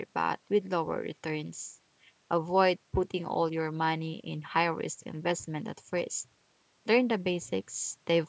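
No technical faults are audible.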